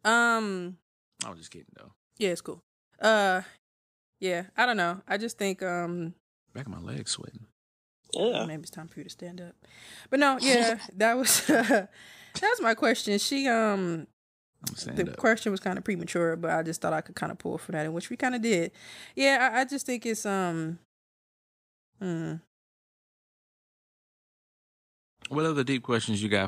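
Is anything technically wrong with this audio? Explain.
No, nothing technically wrong can be heard here.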